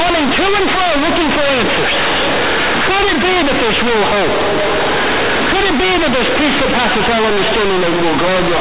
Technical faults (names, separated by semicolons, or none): companded audio read as linear